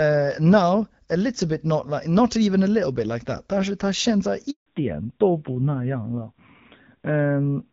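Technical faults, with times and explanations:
4.50 to 4.66 s, handover gap: Right after "是他现在", the speech cuts out for 160 ms. The phone was moving the call from one network to another. No speech frames got through during the switch. The sound fades within a few tens of milliseconds and then stays silent. Nothing is lost to noise or garbling. Whatever was said in that stretch is simply gone. The audio resumes only once the new link is running.
4.66 s to the end, fallback to narrowband: After the gap, the call no longer runs on HD Voice. Before the gap, the wideband AMR-WB codec carried content well past 4 kHz, with only light coding damage, which fits a rate around 12.65 kbit/s. From 4.66 s nothing above 4 kHz remains. The sound turns duller and rougher. This points to the narrowband AMR-NB codec at a lower rate, around 7.4 kbit/s.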